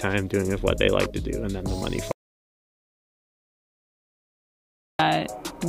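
At 2.12 s the sound stops dead. What follows is an audio dropout to silence lasting about 2.88 s, until 4.99 s. The gap is silent, with no room tone or noise floor underneath. The audio then resumes abruptly, mid-flow. The likely cause is a lost input, such as a disconnected device, a broken link or an accidental mute, while recording carried on writing silence. Whatever occurred during those seconds is missing.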